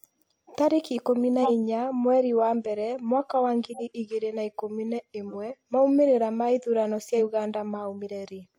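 At 1.42 to 1.51 s the speech is interrupted by a short burst where a corrupt frame was decoded, in fact a run of several adjacent frames. Damaged bits in the compressed data were passed to the decoder and played, so misread gains and codes put energy at unrelated frequencies. The result is a loud squeaky blip, peaking not far below full scale. The same fault returns progressively weaker at 3.70 to 3.82 s and 5.28 to 5.36 s, each hitting a couple of frames.

At 7.13 to 7.19 s compressed frames were skipped. Roughly 50 ms of audio never reaches the output, and playback jumps forward by whole frames, so the speech jumps ahead at the join.

At 8.28 s a final corrupt frame decoded produces a faint chirp, spread over a few frames but low in level.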